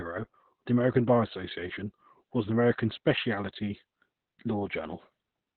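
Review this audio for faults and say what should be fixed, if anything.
Heavy Opus voice compression runs throughout: nothing above 4.3 kHz, and the speech sounds muffled, hoarse and a bit robotic, which points to narrowband SILK at around 8 kbps. To prevent it, encode at a higher bitrate so the codec can keep the full band.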